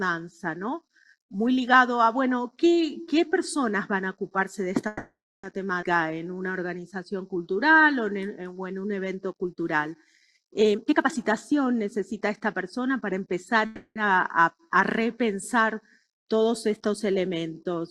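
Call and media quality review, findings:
Call audio freeze, 4.87–5.45 s: sound stalls, last bit carried on as a fading buzz/hiss for 0.56 s, final 0.3 s or so silent. Likely packets held in transit, jitter buffer ran dry. Nothing lost, just a gap, so 560 ms added delay.

Call audio freeze again, 13.66–13.98 s: same deal, 300 ms of filled-in tail fading out, about the last 60 ms silent. Audio picks up where it left off, adds 300 ms delay.

Skip ahead at 5.81 s: playback jumps forward, roughly 0.2 s of audio gone, sides joined with only about 10 ms of fill. Chunk dropped, in transit or by the jitter buffer, while later packets were already queued, which pulls delay back down by around 0.2 s. Probably shedding part of the backlog from the 4.87 s freeze.

Jitter buffer slow-down, 5.95–7.84 s: sound runs at 90% speed, pitch unchanged, things a bit drawn out. Buffer stretching by repeating single pitch periods and slivers of pauses, 187 ms added in total, rebuilding its reserve right after the skip.

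Jitter buffer speed-up, 10.60–13.57 s: sound runs hurried at 117% speed, same pitch. Buffer overfull, trimming short pitch-period pieces over and over to cut latency, about half a second removed. Ends just before the 13.66 s freeze, so it was draining the reserve just as the next stall began.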